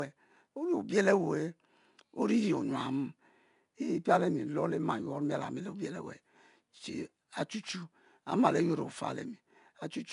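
Throughout this speech clip, 4-bit ADPCM compression codes each sample as a coarse step from a prediction, leaving a gritty hiss that rides on every loud syllable and roughens sharp onsets. Nothing sounds above 10.6 kHz, which points to a low sample rate, with the stream at 89 kbps.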